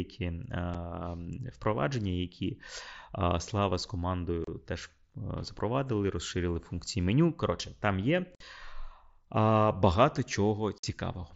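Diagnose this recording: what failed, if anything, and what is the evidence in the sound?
Unconcealed Bluetooth headset packet loss on the wideband mSBC radio link. Short speech holes with abrupt edges occur at 0.74 s, 4.44–4.48 s, 8.35–8.41 s (just after "там є") and 10.78–10.84 s, lasting 7.5 to 52.5 ms. Lost frames were filled with silence or an idle pattern rather than concealed, so the waveform shows sudden gaps and the spectrogram shows narrow vertical strips cut across the band below 8 kHz.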